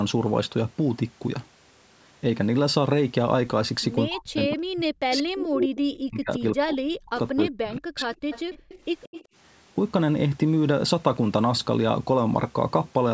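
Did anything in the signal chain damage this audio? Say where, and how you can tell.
Yes. The speech sinks by about 40 dB, 4.08–5.68 s and 6.03–8.11 s, at the call-processing stage: likely speech suppressed in double talk, the echo canceller ducking everything.

A copy of the speech trails 182 ms behind at 5.59–5.78 s, roughly as loud as the original, then fainter at 8.14–8.79 s and 9.03–9.25 s: likely echo leak from a loudspeaker.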